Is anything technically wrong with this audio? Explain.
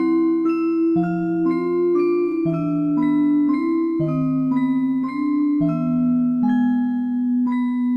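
No, nothing in this recording of sounds points to a technical problem in how the signal was captured, processed or delivered.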